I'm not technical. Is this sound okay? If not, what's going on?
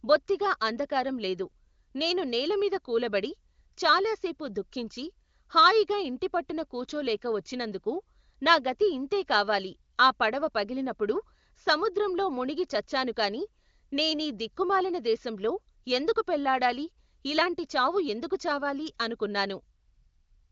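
Yes, this speech recording has no technical faults; it sounds like it went through the AMR wideband (HD Voice) phone codec at a high-quality setting, so it works as a normal HD Voice call would and simply carries nothing above about 7.5 kHz.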